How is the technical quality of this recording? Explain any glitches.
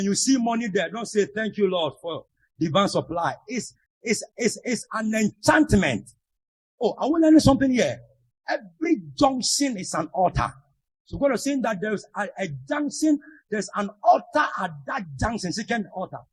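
No glitches can be heard anywhere in the recording. There is nothing here that needs explaining.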